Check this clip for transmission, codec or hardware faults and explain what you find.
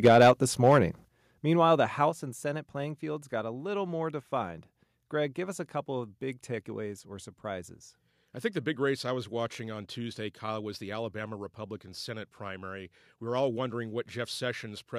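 Two kinds of fault are present, both in the first few seconds of the speech.

Microphone overload occurs from 0.04 to 0.31 s, peaking about 6 dB over full scale with roughly a tenth of samples flattened, and again from 0.66 to 0.79 s, about 4 dB over with a few percent clipped. The likely cause is input gain set too high, so the converter truncates the waveform tops, giving loud syllables a harsh, crackling edge.

Microphone volume stepped down occurs at 0.08 s (about 3 dB), 1.08 s (about 9 dB) and 2.1 s (about 5 dB). Each is an abrupt level drop affecting voice and background together, likely the call software's automatic gain control reacting to the clipped peaks by lowering the device input volume in one step.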